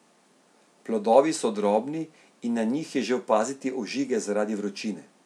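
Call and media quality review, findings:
No audible fault in the speech signal at any point, so no component or mechanism is implicated and no action is needed.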